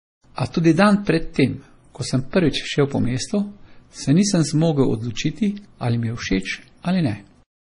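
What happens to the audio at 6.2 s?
The speech was likely squeezed through heavy MP3 compression, around 32 kbps, for the whole clip, so at 6.2 s nothing survives above 10.5 kHz and the sound turns watery and swirly.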